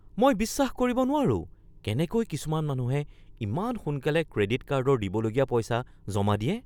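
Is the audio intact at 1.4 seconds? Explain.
Yes, the audio is intact at 1.4 s, with no audible dropout, distortion or other fault at that moment.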